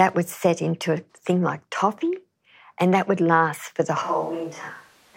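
The close microphone's feed likely dropped out at 4.02 s, leaving a switch to a distant microphone until the end. The speech abruptly turns roomy and hollow, with thinner bass, falling roughly 5 dB, while room noise rises to around 30 dB below the speech.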